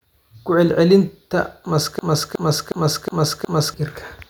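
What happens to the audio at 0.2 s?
Nothing goes wrong at 0.2 s; the speech is intact at that point, with no dropout, click or distortion.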